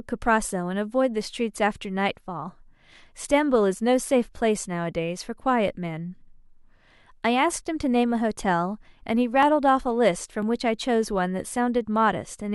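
From 8.43 s to 12.42 s the speech is broken by periodic USB or driver dropouts: about five brief losses, spaced almost exactly 1.0 s apart. Each time, something stalls the audio path and a few milliseconds of signal are skipped outright, so the waveform jumps and a small tick is heard. Their clockwork regularity, and the fact that they tick only where there is sound, separate them from random network packet loss or impulsive clicks.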